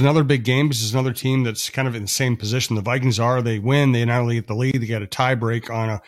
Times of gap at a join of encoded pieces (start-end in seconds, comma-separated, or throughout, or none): 4.71-4.74